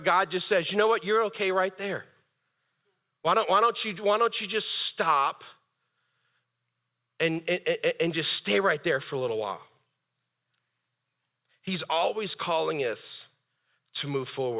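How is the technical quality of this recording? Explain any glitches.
Nothing to flag: there are no audible glitches anywhere in the recording.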